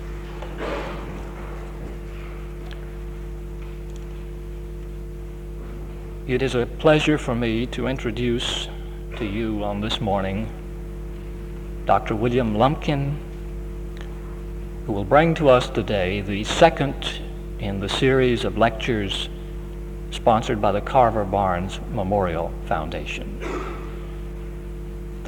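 From start to finish a steady mains hum sits under the audio, a low, fixed-pitch tone at 50 Hz, the power-line frequency, coupled in through a ground loop or a nearby transformer. It is prominent, roughly 10 dB below the wanted signal. What sets it apart from rumble or wind noise is its stable pitch. It holds one unwavering note instead of a broadband, shifting low-frequency wash, and it never fades as the material changes.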